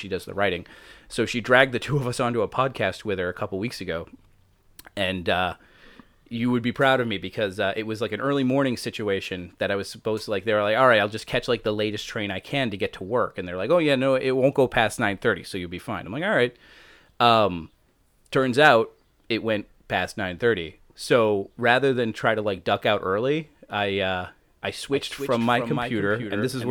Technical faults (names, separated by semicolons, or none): doubled audio track